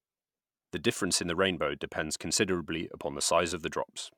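No faults can be heard anywhere in the recording.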